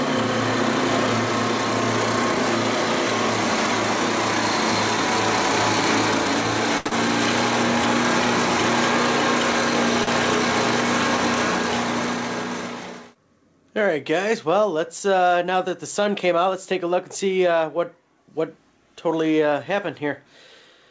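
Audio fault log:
6.78–6.88 s, short stall from a late packet: a packet arrived late and the jitter buffer ran dry, so the receiver stretched the last sound for about 77 ms and then resumed from the same point. Nothing is lost, but the sound is held too long with a faint buzz or dip. Everything after plays about 77 ms later. On a spectrogram the harmonics run flat and unchanging for that stretch, and the waveform shows near-identical repeating cycles.
6.88–6.93 s, short concealed packet loss: directly after the stall, about 40 ms of audio never reached the decoder. The receiver covered the gap with roughly 35 ms of synthetic continuation built from the preceding sound, then crossfaded back into the real signal. This is heard as a brief smear or wobble. A spectrogram shows a blurred, over-smooth patch.
10.04–10.09 s, short stall from a late packet: the same buffer underrun occurs again, more briefly. 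The last sound is held for about 34 ms until the delayed packet arrives, with nothing missing and playback shifted about 34 ms later. The waveform repeats a few cycles almost exactly, and the spectrogram shows a short frozen band. In both views, as across the whole clip, there is no energy above 8 kHz, which fits a wideband call codec.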